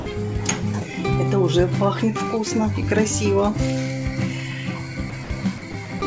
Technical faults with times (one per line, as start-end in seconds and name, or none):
0.00-0.06 sound dropped by the voice detector
5.10-5.30 sound dropped by the voice detector
5.58-5.74 sound dropped by the voice detector
6.00-6.02 sound dropped by the voice detector